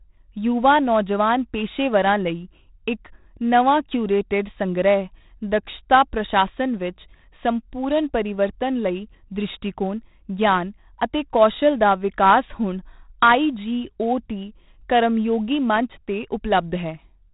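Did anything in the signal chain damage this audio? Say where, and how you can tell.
Yes. The damage happened at the codec stage: the speech was stored with 4-bit ADPCM compression for the whole clip. Each sample was coded as a coarse step from a prediction, so the error is a gritty hiss that rises and falls with the speech and roughens every loud syllable, with distortion on sharp onsets where the step size lags. Nothing is present above 3.8 kHz, which fits a low sample rate and roughly 32 kbps.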